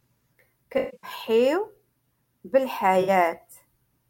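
From 0.77 to 1.10 s there's AAC frame loss with concealment. About 235 ms drops out in patches, the longest around 150 ms, and the decoder rebuilds it from the last good spectrum, so it turns smeared and noisy. A shorter 64 ms patch hits at 3.01 s.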